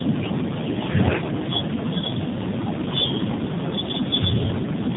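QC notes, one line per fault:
Throughout: tandem speech coding. The speech went through a G.729A coder at 8 kbit/s, then G.711 A-law, then AMR-NB at 7.4 kbit/s. Each low-rate coder re-encodes the previous one's errors, so the speech is rougher and more warbly than one codec alone. Nothing is heard above 3.8 kHz.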